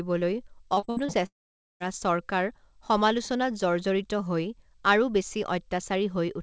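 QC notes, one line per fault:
0.74–1.11 s, repeated packet loss (robotic sound): five short holes in quick succession, the longest about 64 ms, each patched by stretching the previous sound. With roughly 43% of that span filled in, it comes out choppy, with bits missing.
1.26–1.89 s, long network dropout: the sound carries on briefly as a fading buzz or hiss, then nearly half a second of silence before it resumes at "চৰকাৰ সমালোচনাত জৰ্জৰিত হৈ". Likely a stretch of audio that never arrived, so about 0.54 s is simply gone, all band-limited below 8 kHz by the call codec.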